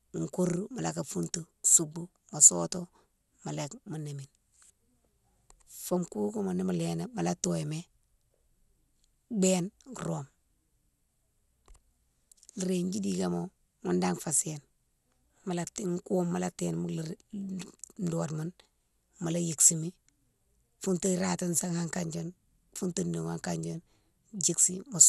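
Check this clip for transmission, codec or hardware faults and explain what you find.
The speech carries one fault throughout its length: coding damage consistent with MP2 compression. Nothing reaches above 12.2 kHz, so the sound is dull, and a gurgling, granular roughness sits on the voice continuously. The likely cause is MPEG Layer II coding at a low bitrate, around 80 kbps. At that rate the encoder cannot fund all 32 sub-bands, so it shuts off the upper ones and quantises the rest coarsely. On a spectrogram, energy stops abruptly at 12.2 kHz, and blocky patches blink on and off just below that edge.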